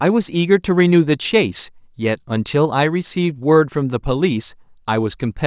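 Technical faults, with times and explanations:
No technical faults are heard in this speech clip.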